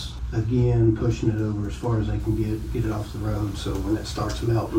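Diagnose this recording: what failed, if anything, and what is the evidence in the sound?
From 2.2 s onward, grainy distortion follows the signal about 30 dB down: low bit depth without dither, likely from sample-format conversion, fitting 7-bit rounding.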